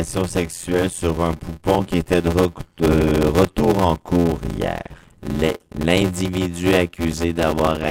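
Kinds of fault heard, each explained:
Block size mismatch (padded): throughout, each block arrives partly filled and is topped up with zeros, inserting a short gap every block. This produces an 86.1 Hz buzz, fitting 512-sample blocks, and the sound runs at 0.625 times normal speed with roughly unchanged pitch.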